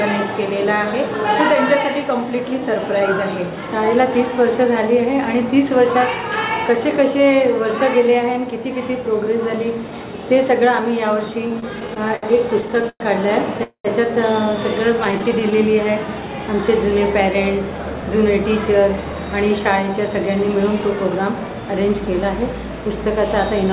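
From 11.48 to 12.25 s the audio catches and drags in eight short hitches, the longest 66 ms, then again from 12.61 to 13.03 s in five, one lasting 107 ms. These are repeated stalls (stutter): packets arrived late, the jitter buffer kept running dry, and the receiver stretched the last sound to cover each wait, so nothing is lost.

At 13.63 s the sound hangs, fades, and drops to about 90 ms of silence before resuming at 13.88 s. This call audio freeze likely came from packets held up in transit. The buffer emptied, the receiver continued the final sound until it died away, and roughly 0.21 s of delay was inserted.

A lighter stutter returns from 15.05 to 15.54 s, with seven tiny gaps of no more than 10 ms each. Overlapping it, from 15.24 to 15.85 s, the audio slows to 94% speed at unchanged pitch and sounds slightly drawn out. This jitter buffer slow-down happened because the receiver, short of reserve, repeated single pitch periods, adding 42 ms.

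From 17.65 to 21.49 s the opposite happens. The audio runs at 107% speed with its pitch intact and sounds slightly hurried. In this jitter buffer speed-up, the buffer had built up more audio than it wanted, so the receiver trimmed brief pitch-period slices until it had shed about 0.3 s.

Throughout, nothing is heard above 4 kHz, which fits the G.711 A-law call path at 64 kbps.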